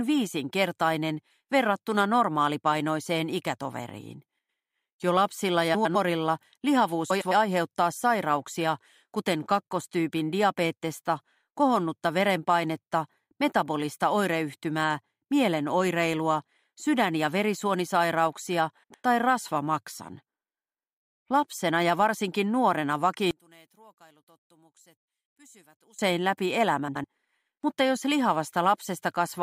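A garbled flutter breaks the sound at 4.38 to 4.59 s, 5.74 to 5.96 s, 7.10 to 7.32 s and 18.83 to 19.04 s. These are frames out of order: two neighbouring blocks of about 105 ms each, which fits four-frame runs, play with their halves exchanged, so nothing is lost but the stretch comes back scrambled.

From 23.31 to 25.99 s the sound drops by about 29 dB to a faint remnant, with nearly everything gone, background included. The likely cause is one channel inverted: with one side's polarity reversed, the shared content cancels when the channels are summed to mono.

At 26.87 to 27.04 s the same scrambled flutter returns in a shorter form, with two swapped blocks of about 78 ms, consistent with three-frame runs of frames out of order.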